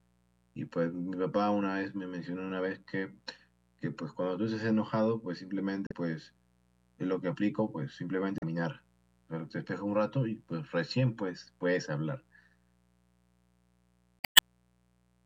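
A mains buzz runs under the speech from start to finish. It is tied to the 60 Hz supply. Sharp switching spikes, twice per cycle, have leaked into the signal path. That points to a dimmer, a rectifier or a missing shield. The spikes carry a dense ladder of 60 Hz harmonics reaching several kilohertz. The result is a steady, raspy buzz rather than a smooth hum. It sits well below the speech.

Damaged data in a compressed stream breaks through three times. The first runs from 5.87 to 5.92 s, the second from 8.38 to 8.43 s. The third, the longest, runs from 14.19 to 14.40 s. Each time, part of the coded stream is wrong. The decoder misreads those frames, loses sync and hunts for the next frame header. Each one is heard as a short squawk or blip, then the sound picks up again.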